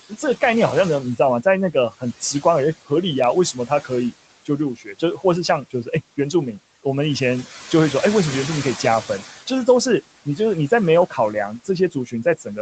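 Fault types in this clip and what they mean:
noise suppressor artifacts: A frame-by-frame suppressor treats the steady room noise, about 17 dB below the speech, as noise and pulls it down by about 18 dB. The background sinks in every pause and swells back under the talking, so the floor pumps. On a spectrogram the gaps between phrases go nearly black, and a faint haze reappears only beneath voiced stretches. Everything stays below 8 kHz, as the call path's bandwidth allows.
speech cut by the noise suppressor: The suppressor mistakes parts of the speech for noise and turns them down by about 12 to 15 dB, so soft consonants and word tails sound swallowed. This happens at 0.09–0.42, 1.16–2.45, 3.53–4.13, 4.45–5.24 and 5.70–6.33 s, and from 11.1 s to the end. In each of the first five, only short pieces, from a tenth to a few tenths of a second, are affected. The waveform shows dips in the speech envelope, and the spectrogram shows faded speech energy there.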